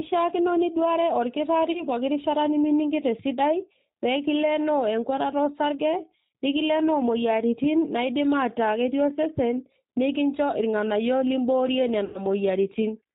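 A speech recording carried over a G.729 codec, which sounds like the 8 kbit/s voice codec. The speech is rebuilt from a vocal tract filter, a pitch predictor and a few pulses per frame, with nothing above 4 kHz, so the speech sounds band-limited, rough and faintly synthetic throughout, with plainly audible coding damage. There is also VoIP packet loss concealed by the speech codec, twice. The decoder had to invent missing audio by extending its last pitch and filter at a falling gain. About 30 ms went missing at 1.72 to 1.84 s, which fits one lost packet, and about 90 ms at 12.05 to 12.19 s, which fits three. Each gap is heard as a stretched buzzy tone or coloured noise that fades, with the speech staying weak or smeared for a moment after.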